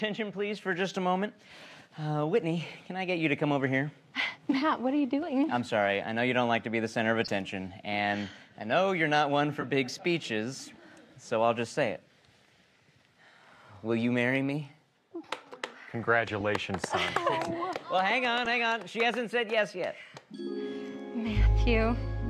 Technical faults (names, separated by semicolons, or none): corrupt frame decoded